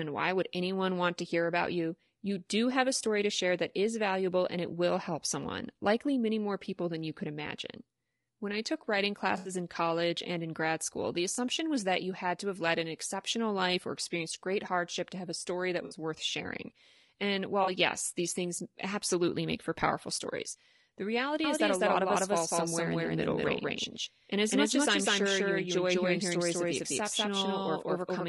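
Speech runs throughout with a rough, grainy texture, noise sitting between the harmonics and a thin, synthetic top band, consistent with low-delay AAC compression at a low bitrate, likely AAC-ELD at around 32 kbps. Its very short frames resolve pitch harmonics poorly. Four brief patches of AAC frame loss with concealment break through. The first runs from 9.37 to 9.51 s, between "I took writing" and "in college and in". The others fall at 11.35 to 11.38 s, from 15.85 to 15.95 s between "have a story that" and "worth sharing", and from 17.63 to 17.69 s. They span roughly 20 to 80 ms of lost material. Each sounds smeared, noisy or phasey rather than silent, because the decoder rebuilds the gap from the last good spectrum. That sets them apart from clean dropouts or clicks. From 21.44 s, right after "for powerful stories the", to the end, a doubled audio track appears. A second full-band copy, about as loud as the first, trails it by roughly a fifth of a second. 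It switches on abruptly and has no decay or room colour, which distinguishes it from echo or reverberation. It was likely produced by a second, slower capture path mixed back in.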